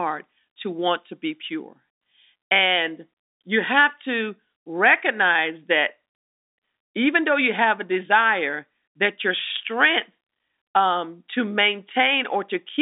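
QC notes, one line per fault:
No faults turn up here. The sound runs at G.711 telephone quality, topping out around 3.8 kHz with the band sitting roughly between 250 Hz and 3.7 kHz, which is just how a landline is meant to sound.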